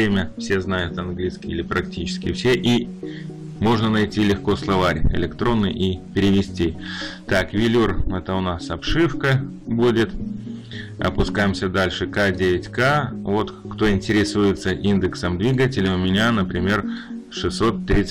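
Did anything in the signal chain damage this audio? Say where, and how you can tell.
Yes, hard clipping throughout: a converter or number-format stage overdriven by about 12 dB cuts peaks flat on roughly one sample in twenty, adding harsh fuzz to loud sounds.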